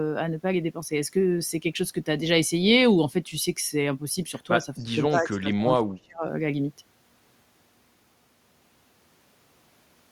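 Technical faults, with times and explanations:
4.63 to 6.24 s, speech suppressed in double talk: the speech repeatedly dips and breaks up, with about a second in total pulled down and the deepest cuts reaching roughly 30 dB below the surrounding level. The likely cause is an echo canceller that heard the far side talking at the same moment. Unable to tell this talker from its own loudspeaker echo, it attenuated everything it picked up, so the voice is pushed down in pieces.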